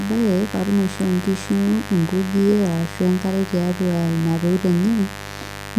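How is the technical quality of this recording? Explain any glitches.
A mains buzz runs through the whole speech recording, fairly prominent at roughly 15 dB below the voice. Sharp switching spikes, twice per 50 Hz cycle, leak in from a dimmer, rectifier or unshielded path, stacking harmonics into the kilohertz range and producing a steady, raspy buzz.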